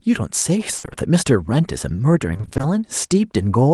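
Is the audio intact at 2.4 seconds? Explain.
No, repeated packet loss (robotic sound) runs from 2.33 to 2.65 s: eight 20 ms gaps are patched by stretching earlier sound, so half that stretch is filled in, sounding choppy and robotic.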